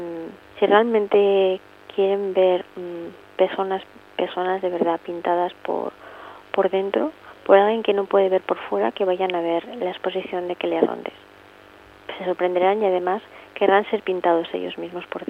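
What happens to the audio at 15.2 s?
Nothing goes wrong at 15.2 s; the audio plays through that moment intact, with no dropout, click or distortion.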